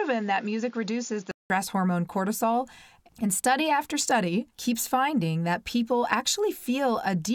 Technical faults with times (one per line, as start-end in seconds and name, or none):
0.00-1.50 input switched to a poorer device